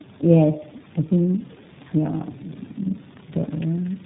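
Rough, muffled and warbly from start to finish, with nothing above 3.8 kHz: tandem speech coding, as G.729A speech was decoded and recoded through iLBC.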